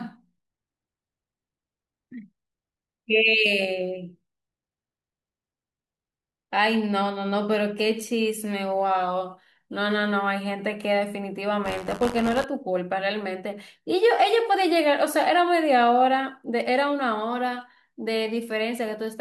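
Buffer tearing at 11.64 to 12.45 s: writer and reader cross each period, splicing in a sliver of audio roughly 40 ms old. The result is a robotic 93.8 Hz buzz over the speech, which fits a 512-sample buffer.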